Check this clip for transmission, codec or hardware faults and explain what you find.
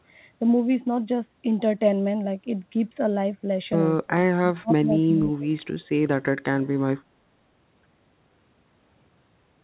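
One fault turns up, in two places, over a narrowband call path that carries nothing above 4 kHz, consistent with G.711 A-law at 64 kbps. Speech suppressed in double talk: from 4.05 to 4.12 s and 4.6 to 5.16 s the speech sinks by about 20 and 25 dB, likely because the echo canceller mistook it for loudspeaker echo while both sides talked.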